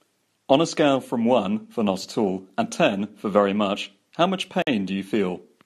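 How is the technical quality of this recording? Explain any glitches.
There is one glitch: a gap at a join of encoded pieces, from 4.62 to 4.67 s. The speech drops into silence for 49 ms and resumes where it stopped, with smeared edges. Separately encoded segments were joined untrimmed, leaving encoder start delay and end padding.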